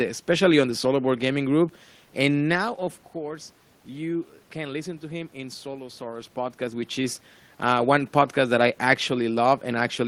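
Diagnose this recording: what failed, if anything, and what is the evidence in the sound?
Nothing in this speech recording points to a failure at any stage; the background noise is just the room around the microphone, and the level shifts around 2 s and 6 s are only the talker moving relative to the mic.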